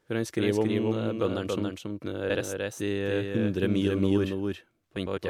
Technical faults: doubled audio track; frames out of order

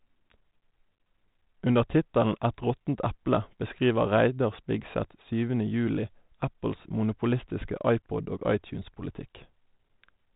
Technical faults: none

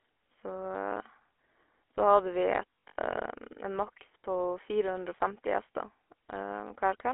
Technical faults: GSM full-rate codec; lost GSM frames

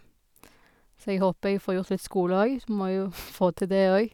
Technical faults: none

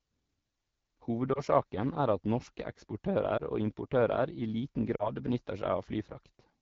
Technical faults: AMR wideband (HD Voice) codec; lost AMR speech frames

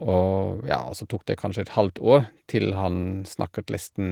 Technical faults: none

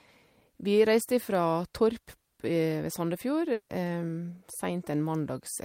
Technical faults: long network dropout

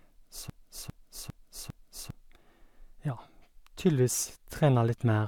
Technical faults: broken-record loop

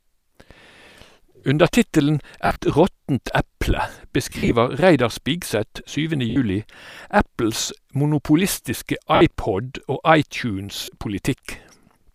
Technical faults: lost LE Audio frames

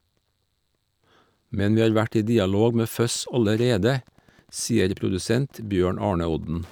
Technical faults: Wi-Fi interference

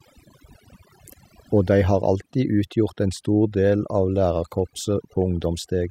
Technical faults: overdone noise removal

